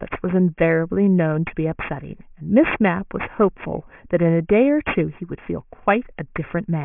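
Aliasing throughout: downsampling to 6 kHz without filtering folds everything above 3 kHz down, so sibilants turn gritty and the spectrogram shows mirrored energy packed against 3 kHz.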